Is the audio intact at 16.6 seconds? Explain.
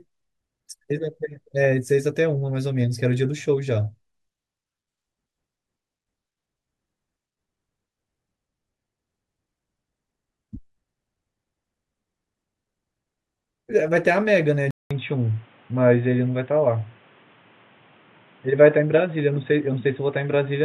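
No. From 14.71 s to the end, sound is cut off above 3.8 kHz after a 200 ms gap. This is likely an input switched to a poorer device.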